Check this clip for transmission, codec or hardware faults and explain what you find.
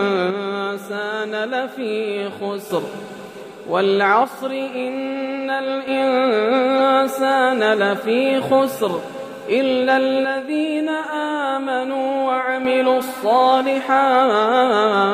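Two kinds of fault are present: three stretches where the level sags and one brief decoding glitch.

From 0.31 to 2.71 s, 4.24 to 5.88 s and 10.25 to 12.65 s, the sound abruptly drops by about 6 dB and then recovers. The likely cause is one channel dropping out, so the mono sum loses half of the shared content. A waveform shows flat-topped steps down in envelope, and a spectrogram shows uniform dimming across all frequencies.

From 6.78 to 6.80 s, a corrupt frame was decoded. Damaged bits in a single compressed frame sent energy to the wrong frequencies, peaking near -15 dBFS. It sounds like a short blip or chirp. A spectrogram shows it as a thin vertical smear.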